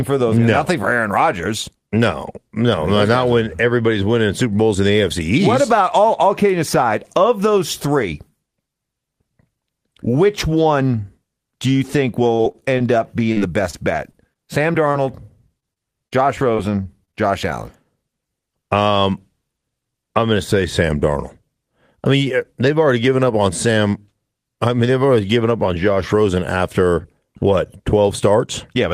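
Speech clip with two faults. Repeated packet loss (robotic sound) runs from 12.35 to 14.96 s, just after "one do you think", and again from 15.60 to 17.15 s. About a dozen short holes, then several more, each up to 41 ms and 31 ms long, are bridged by extending the preceding sound. About 10% of each stretch is concealed, which makes the audio choppy, with pieces missing. A jitter buffer speed-up follows at 19.10–19.49 s. After a delay build-up, the receiver trimmed roughly 40 ms of pitch periods, so the speech runs about 8% fast at unchanged pitch and sounds briefly hurried.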